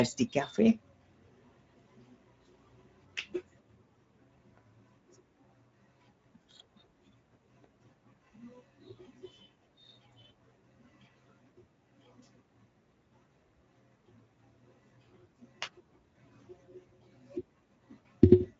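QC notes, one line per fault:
Throughout: Speex codec. The speech has a plainly audible hoarse, noisy grain, pointing to a bitrate near 16.8 kbps that leaves this CELP coder too few bits for the excitation. A spectrogram shows smeared harmonics and a hard ceiling at 7.6 kHz.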